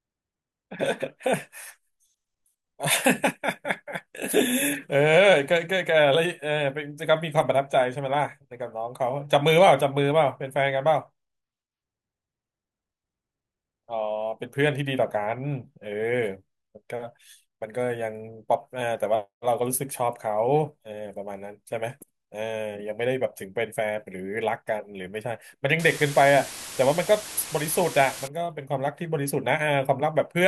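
From 25.79 to 28.28 s, low bit depth with dither at 5 bits turns rounding error into a steady, even hiss, strong relative to the speech, without distortion.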